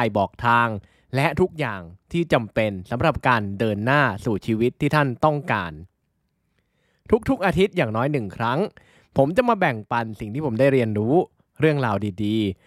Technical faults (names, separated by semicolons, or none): none